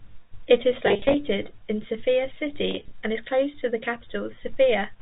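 Packets dropped in scattered short runs at 0.86–1.14 s (about 170 ms lost, gaps up to 30 ms) and 2.71–2.91 s (about 110 ms, gaps up to 20 ms). Packet loss with pitch repetition refilled each gap with the last pitch cycle, giving a buzzy, slightly held note through the narrowband telephone sound.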